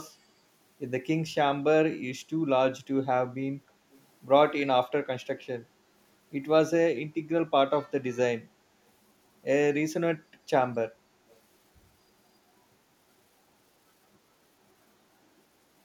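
Speech with a brief echo leak heard twice, from 3.91 to 4.03 s and from 11.29 to 11.39 s: a faint copy of the voice trailing it by 266 ms, very low at roughly 35 dB under the speech. The likely cause is a far-end loudspeaker whose echo canceller let some of its own playback back into the microphone. Unlike room reverberation, which is a smooth decaying tail, this is a separate copy at a fixed lag.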